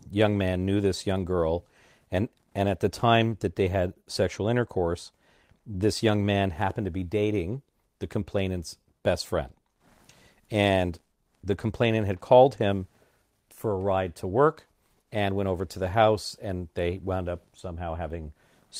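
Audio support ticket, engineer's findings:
No fault found on listening through the speech recording. No symptom, time or component to report.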